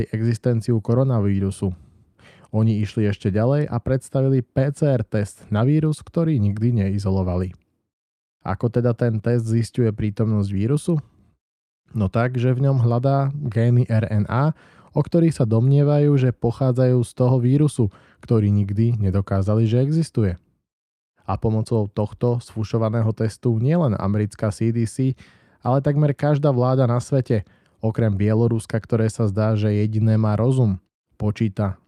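Listening to this speech recording, nothing technical stood out at any point.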